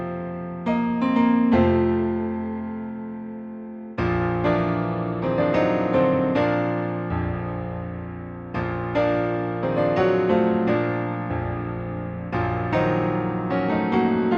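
No technical faults are audible in this audio.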